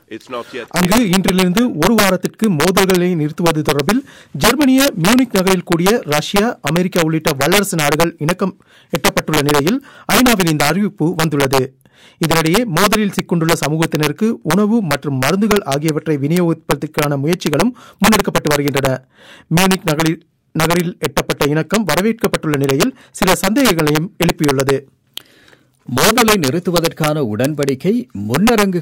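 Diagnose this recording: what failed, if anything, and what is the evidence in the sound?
Integer overflow in the gain or sample-format conversion stage runs through the whole recording. The loudest peaks crack violently, far harsher than clipping. Gain drives the signal about 6 dB past full scale. Around one percent of samples wrap to the opposite sign instead of limiting.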